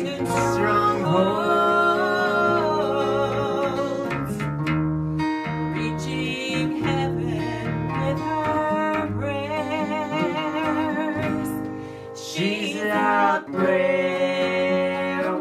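No technical faults are audible.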